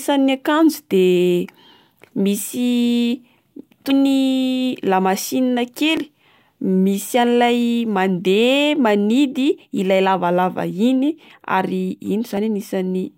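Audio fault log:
3.90 s, 5.97 s, 12.37 s: dropped buffer (overrun). Samples were likely overwritten before being read, roughly 70 ms at 3.90 s and about 20 ms at the others. The remaining audio butts together without silence, so the speech jumps ahead.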